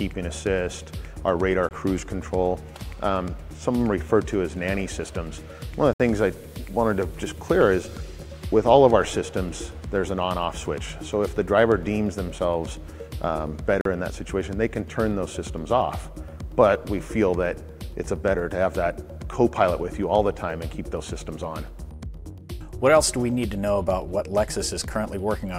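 Audio packets most likely failed to reach a wireless link in time, a Bluetooth dropout, so output went silent at 1.69–1.71 s, 5.93–6.00 s and 13.81–13.85 s. The holes last about 21, 64 and 43 ms, with abrupt or briefly faded edges, and the sound resumes further on, as though it kept playing.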